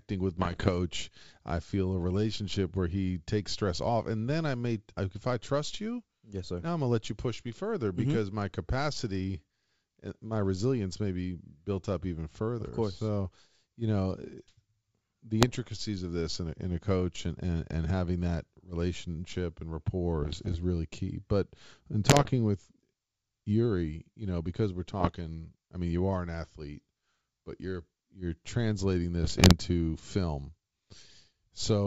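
Bit errors on an ADPCM link crackle through at 0.37–0.70, 15.41–15.56, 20.23–20.57, 22.06–22.31, 25.00–25.16 and 29.22–29.54 s. Flipped bits throw the decoder's step size and predictor off, so each pop smears into a rough burst with jumpy level, worst around 22.1 s.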